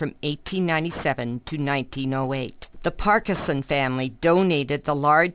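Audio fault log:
Throughout: aliasing. Content above 4 kHz folds back into the band below it at wrong pitches, about 20 dB under the main sound. Sibilant and bright detail turns gritty and metallic. This fits a drop to an 8 kHz rate without filtering first.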